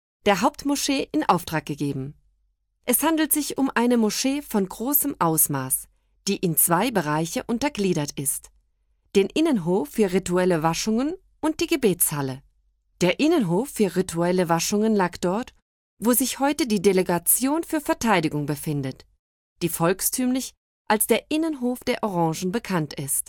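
From 3.01 s to 4.06 s there are GSM signalling bursts: a galloping dit-dit-dit of short buzzes, well below the level of the main sound. A nearby 2G phone is exchanging brief radio bursts with the network, and the audio circuitry rectifies them, turning the 216.7 Hz burst rate into an audible buzz. Unlike steady mains hum at 50 or 60 Hz, this buzz comes in clipped, rhythmic groups and stops after about a second.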